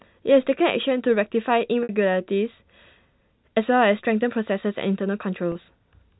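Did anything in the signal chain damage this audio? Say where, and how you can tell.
Yes, at the network stage: packet loss with pitch repetition at 1.83 s (about 60 ms, fitting two lost packets) and 5.52 s (about 30 ms, one packet). Each gap sounds like a briefly held, buzzy tone, the last pitch period looped, rather than the hard silence or click of a plain dropout. The narrowband G.711 telephone coding is working normally.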